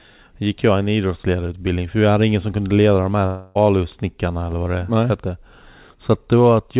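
At 3.26 s the sound breaks off and the receiver starts papering over the hole, which is what you'd expect from a long network dropout, likely a burst of lost packets. For nearly all of the 0.31 s up to 3.57 s you hear the last bit of sound smeared into a buzzy, fading continuation rather than dead air. When the audio resumes, about 0.3 s of the original is simply gone. The narrowband call path, with nothing above 4 kHz, keeps that filler sounding thin.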